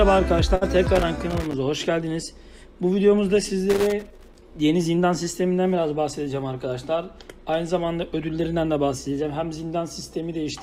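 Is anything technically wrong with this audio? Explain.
Yes, there are two problems. At 0.55 to 0.64 s, a burst of packet loss dropped about 60 ms of audio; the receiver stretched and faded the last sound into the gap, then skipped ahead. From 0.96 to 1.54 s and again from 3.70 to 4.42 s, loose connector crackle appears: a dirty or worn contact repeatedly breaks the signal, producing irregular bursts of scratchy crackling.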